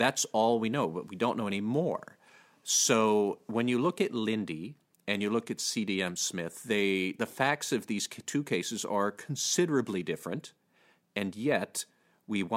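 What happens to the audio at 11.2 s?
Nothing goes wrong at 11.2 s: the speech there plays through cleanly, with no dropout, click, distortion or other audible fault.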